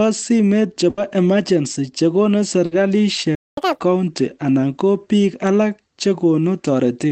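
At 0.89 to 0.99 s and again at 2.65 to 2.73 s, a burst of packet loss leaves gaps of about 80 ms and 60 ms. Concealment stretches the last sound into a fading buzz or hiss before the speech resumes further on. From 3.35 to 3.57 s a playback stall silences the output for about 220 ms mid-flow, likely because the player ran out of data. Catch-up at higher speed follows from 3.57 to 3.80 s. The backlog plays at 2.0 times speed, so the voice rushes and jumps up by most of an octave before settling. All of this sits on the Opus call path, whose band limit of about 8 kHz dulls the top end throughout.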